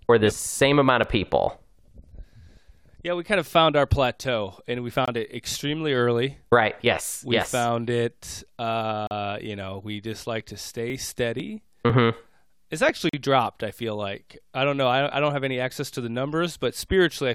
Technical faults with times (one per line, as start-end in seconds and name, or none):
1.03 gap between stream segments
5.05-5.08 gap between stream segments
9.07-9.11 gap between stream segments
10.40-12.89 periodic USB or driver dropouts
13.09-13.13 gap between stream segments